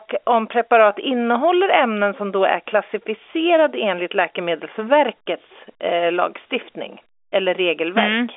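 Nothing stood out on listening to this speech.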